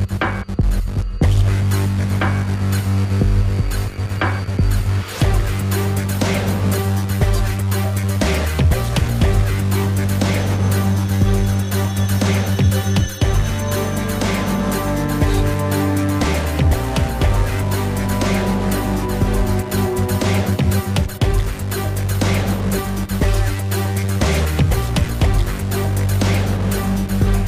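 No technical faults can be heard anywhere in this clip.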